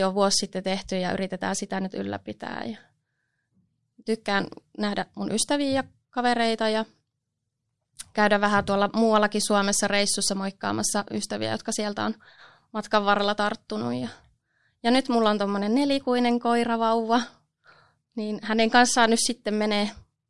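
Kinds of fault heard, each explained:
No technical fault can be heard anywhere in this speech recording. There is nothing here that calls for a line-by-line explanation.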